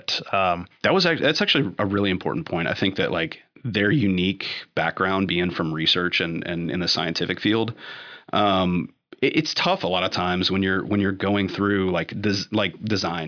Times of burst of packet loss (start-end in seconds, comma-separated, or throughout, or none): none